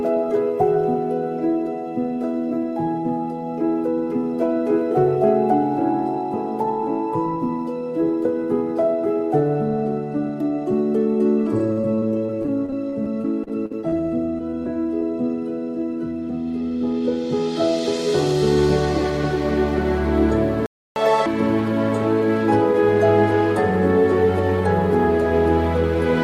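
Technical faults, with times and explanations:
11.59–13.94 s and 14.38–15.03 s, repeated packet loss (robotic sound): the audio turns choppy, with a robotic buzz and small pieces dropping out, first in a longer run and then briefly again. Packets kept arriving late or not at all. Each hole was patched by stretching the last bit of sound, about 18% and then 11% of these stretches. Where patching ran out, pieces went missing outright, and the longest hole was 46 ms.
20.66–20.96 s, playback stall: the sound simply stops mid-flow for about 0.3 s, then resumes. The player most likely ran dry of incoming data, or its processing was briefly blocked, so nothing reached the output until it recovered. Because the gap is a clean dead stop, without the patching heard earlier, it reads as a halt in playback, not as lost pieces being smoothed over.
20.96–21.26 s, catch-up at higher speed: right after the silence the audio rushes forward at double speed, and its pitch jumps up by about ten semitones, giving a brief chipmunk-like squeak. 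The player is draining the backlog that built up during the stall by resampling it faster, so the lost 0.3 s is won back in about the same time.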